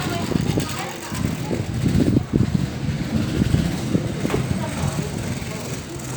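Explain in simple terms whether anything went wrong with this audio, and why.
Nothing went wrong here: the recording arrives intact, with no gaps, glitches or distortion anywhere in the sound.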